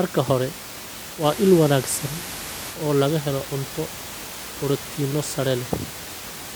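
From 1.14 s to 2.82 s the receiver is digital radio blending to analogue: it lost the digital stream and cross-faded over about 127 ms to the station's FM signal, then back. The speech gains a faint hiss, roughly 35 dB down, and shifts level by about 2 dB. Unlike a codec dropout, the audio never gaps. It eases into a different-sounding copy, distinct from the room noise about 12 dB below the speech.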